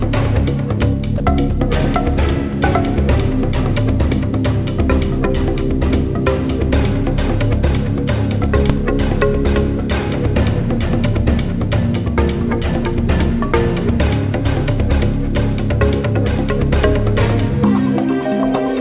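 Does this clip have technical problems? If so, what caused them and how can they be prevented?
Yes. At 1.18 to 1.20 s, the sound briefly gives way to a 20 ms patch of steady, featureless hiss before returning. This sound dropped by the voice detector was likely caused by the sender's voice activity detection misjudging a quiet moment as background, halting transmission so the receiver filled the gap with comfort noise. Prevent it by lowering the detector's threshold, adding hangover time after activity, or disabling discontinuous transmission for this material.

At 8.70 s there is a single sharp bang, consistent with invalid numbers at full scale. A processing calculation produced infinite or undefined results, which were clamped to maximum amplitude for a very short block, about 2.7 ms, which fits a 128-sample processing block. Because the block is so short, the jump to an extreme value and back is heard as one pop rather than two. 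All of this sits within audio that stops at 4 kHz from the call path. Prevent it by checking for non-finite values after each processing stage and replacing or muting them before output.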